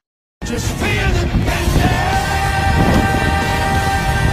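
Overlapping chunks occur at 0.39–0.41, 0.91–0.93, 1.43–1.45, 1.95–1.97, 2.47–2.49, 2.99–3.01, 3.51–3.53 and 4.03–4.05 s. The sound arrives in 0.5 s blocks, and each block begins 20 ms before the previous one finished. That stretch plays twice at every join, producing a regular stutter-click roughly every half second.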